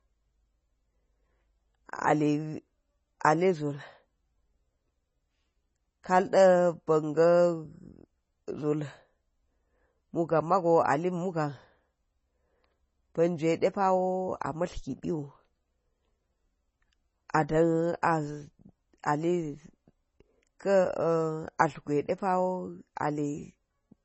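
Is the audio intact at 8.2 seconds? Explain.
No. Throughout the speech clip, including 8.2 s, likely MP3 compression at a bitrate starved enough to fit about 24 kbps cuts everything above 8 kHz and drops weak frequency lines frame to frame, leaving heavy watery, swirling artefacts, metallic chirps on s sounds, and smeared attacks.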